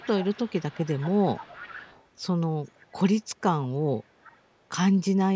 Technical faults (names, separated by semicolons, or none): echo leak